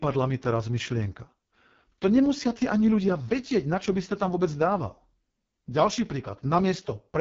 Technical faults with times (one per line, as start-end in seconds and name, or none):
0.00-7.21 AMR wideband (HD Voice) codec